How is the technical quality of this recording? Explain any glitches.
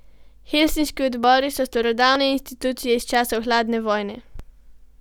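The speech has three short glitches, at 1.24, 2.16 and 4.40 s. Each is a point where the sound jumps ahead, skipping roughly 20 ms, likely a dropped buffer (overrun) discarding unread samples.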